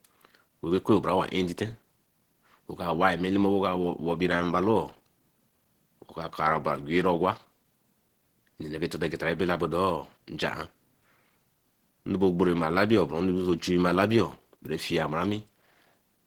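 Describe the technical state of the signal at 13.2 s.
At 13.2 s the speech has the same plainly audible codec damage as the rest of the clip: a muffled, hoarse quality with a grainy, rough texture. This is likely Opus compression running in its hybrid mode, where a speech coder handles the lower band and the upper band is rebuilt from coarse band energies, which fits a starved rate near 16 kbps. On a spectrogram, content still reaches about 20.2 kHz, but the upper bands look smeared and noise-filled rather than finely detailed.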